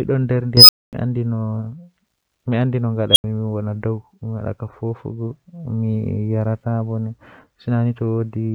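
At 0.57 s an unstable filter erupts: a high tone around 5 kHz swells over 118 ms into a clipped squeal, runs to 0.93 s, then the output drops to 240 ms of silence. At 3.11 s it recurs near 3 kHz, building in 52 ms, ending at 3.24 s, followed by 80 ms of silence. A recursive filter is blowing up and overflowing until it resets. Acoustic feedback would swell more slowly and never fall abruptly silent.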